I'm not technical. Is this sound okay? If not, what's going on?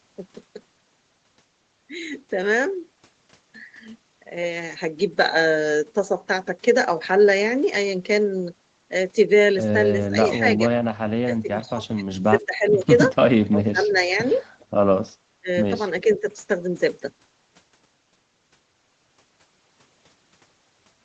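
No. Between 10.1 and 16.3 seconds the voice keeps dipping or briefly vanishing: at 10.1–10.59, 11.23–12.88, 13.45–14.22, 15.41–15.5 and 16.04–16.26 seconds. This is likely speech suppressed in double talk, where the call's echo canceller muted this talker while the other side spoke.

At 14.35–14.66 seconds a very faint copy of the voice returns about 0.4 seconds late. This is likely an echo leak, where loudspeaker sound reached a microphone and was sent back.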